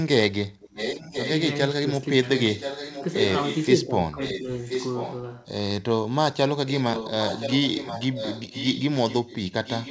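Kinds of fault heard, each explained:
Echo leak: at 0.6–1.32 s, 2.24–3.57 s, 4.21–5.17 s, 6.66–8.83 s and 9.08 s to the end, a copy of the speech returns 1.02 s late. It sits about 5 dB under the talker at first, later about 10 dB, likely loudspeaker pickup the echo canceller missed.
Speech suppressed in double talk: between 3.76 and 4.2 s the talker's level drops in pieces, about 0.3 s in all and as deep as about 20 dB. A shallower dip of about 5 dB follows at 4.38–4.48 s, likely the echo canceller turning down both overlapping sides.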